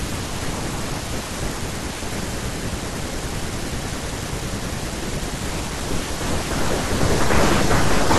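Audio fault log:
No faults detected in the speech recording.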